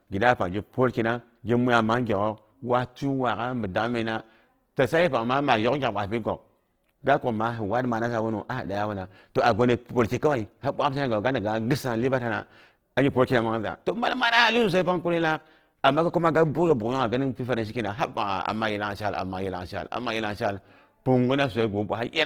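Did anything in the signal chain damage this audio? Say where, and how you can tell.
Yes. Throughout the speech the tone is rough and grainy, with a noisy fizz filling in the upper bands instead of leaving hollow gaps, while the audio still reaches up to about 20.2 kHz. That points to the codec stage, likely Opus compression in its fullband music (CELT) mode, starved at a rate around 16 kbps. Short of bits, the encoder keeps each band's energy but fills the detail with folded or noise-like content, which produces this texture.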